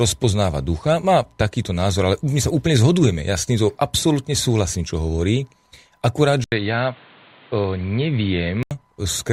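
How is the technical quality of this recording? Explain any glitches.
Quality takes a hit for a couple of seconds near the end. At 6.44 s there's an 80 ms gap, then the speech turns dull and boxy, with nothing above 4.5 kHz, a level drop of about 5 dB, and new background noise sitting roughly 30 dB under the voice. It recovers at 8.71 s. That pattern points to the input switched to a poorer device, likely a narrower-band mic or headset call profile taking over briefly before the original input came back.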